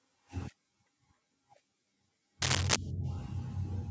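From 2.42 to 2.76 s, a burst of cable scratch noise cuts across the speech: dense, uneven crackle and rustle sitting roughly 5 dB above the signal for about a third of a second. The likely cause is a worn cable, connector or control being moved, so that its contact resistance jumps around rapidly and injects irregular noise into the line. The call microphone processing limits the band to 8 kHz, and the scratching is heard within that band.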